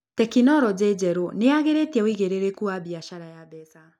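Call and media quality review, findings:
Zipper noise, 2.64–3.76 s, just after "nĩyagĩrĩtie uigĩrĩrĩku": fine ticking rides on the speech during a level drop of roughly 15 dB. Probable component: gain stage applying unsmoothed steps at roughly 100 per second, which fits a 10 ms processing block. Waveform: staircase envelope. Spectrogram: faint evenly spaced vertical broadband lines across the fade.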